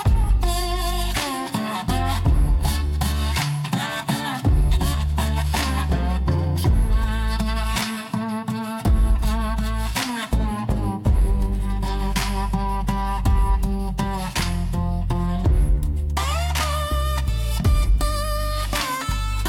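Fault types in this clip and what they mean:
No technical fault can be heard anywhere in the audio; the signal stays intact and steady throughout, with no interruptions, level jumps or added disturbances.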